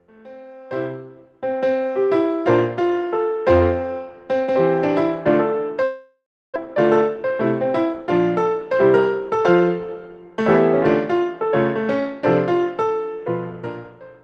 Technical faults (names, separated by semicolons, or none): long network dropout; jitter buffer speed-up